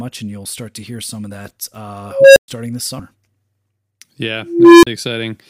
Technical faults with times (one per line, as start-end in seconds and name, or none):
2.02-2.48 unstable filter
2.99 compressed frames skipped
4.39-4.87 unstable filter